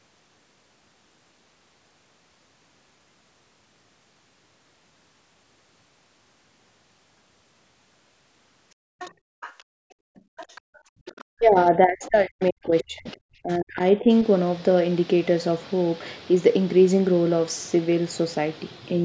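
From 8.75 to 10.71 s the room sound behind the talker sinks away, falling by up to about 31 dB for roughly a second and a half in total before it comes back. This is background gated by the echo canceller, which clamped the microphone down hard while its loudspeaker was playing.

Overlapping that, from 8.99 to 10.8 s, a faint second voice can be heard about 20 dB below the talker. This is the other side's voice leaking through: the far end's audio, played on the talker's loudspeaker, was likely not fully removed from the microphone signal by the echo canceller.

From 10.99 to 13.08 s the talker's speech dips sharply, by as much as about 40 dB, for roughly two seconds altogether. It happens again from 13.42 to 14.08 s, with drops of about 30 dB across roughly 0.4 s. This is speech suppressed in double talk. With both sides speaking at once, the echo canceller likely could not tell the talker apart from the loudspeaker echo and turned everything down.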